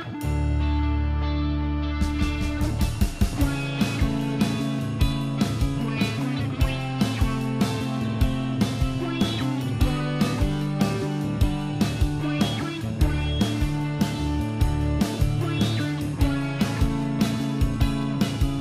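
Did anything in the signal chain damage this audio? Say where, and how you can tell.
No, nothing in the signal chain stood out as damaging this audio on listening.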